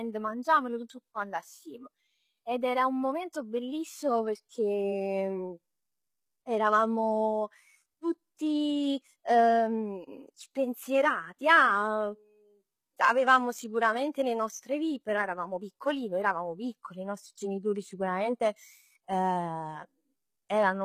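From start to finish the speech carries plainly audible HE-AAC compression, likely from a very low bitrate around 20 kbps. Unlike a dull low-pass cut, the treble stays bright, but it is rebuilt from copied lower bands, so s sounds come out gritty, metallic and lispy.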